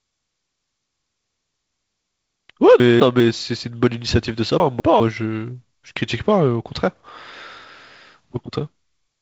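Chunks out of order occur at 2.8 to 3.2 s and again at 4.6 to 5.0 s in this speech clip. In each spot a 200 ms piece of audio plays one chunk late, after the piece that should follow it. Nothing is missing, but the speech jumps forward and back within those 0.4 s, creating a jumbled moment with three abrupt joins around each swapped pair. The clip carries G.722 wideband telephone coding, with nothing above 7.7 kHz, a faint upper-band hiss, and a slightly noisier lower band that points to the 48 kbit/s mode.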